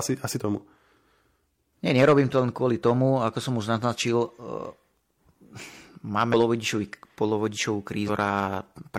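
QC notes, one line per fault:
0.36–0.41 s, 6.29–6.34 s, 8.04–8.10 s: damaged data in a compressed stream. Corrupt frames make the decoder lose sync, producing brief glitches of about 50 ms in the speech.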